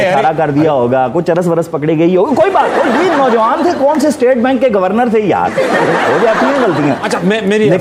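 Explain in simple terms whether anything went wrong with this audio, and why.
Nothing went wrong: no dropouts, glitches, clipping or timing faults can be heard anywhere in the clip.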